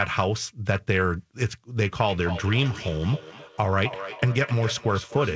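Speech in which, from 2.09 s to the end, each word returns roughly every third of a second, thinner and ringing, peaking about 12 dB below the voice. This is feedback echo between two devices: a second device in the room replays the call and the first device's microphone sends it round again.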